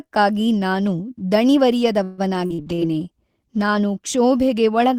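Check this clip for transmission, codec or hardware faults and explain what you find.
Two transmission faults are audible, overlapping in the middle of the speech.

From 2.03 to 2.81 s there is repeated packet loss, giving a robotic sound. Five gaps occur, the longest 145 ms. Each is bridged by extending the preceding sound, so about 39% of the stretch is concealed, with 160 ms dropping out entirely. The result is choppy.

From 2.57 to 3.92 s a call bitrate drop makes the speech rough and dull. This fits the encoder falling from roughly 32 kbps to about 17 kbps for 1.27 s, coding more coarsely and cutting off high frequencies until the rate recovers.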